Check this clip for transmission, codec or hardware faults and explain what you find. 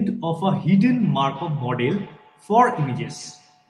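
There's one real problem here: feedback echo between two devices, running from 0.78 s to the end. Two devices on the same call sit close enough that one's speaker feeds the other's microphone, which neither echo canceller removes. The speech returns roughly every fifth of a second, peaking about 19 dB below the direct sound, thin and ringing.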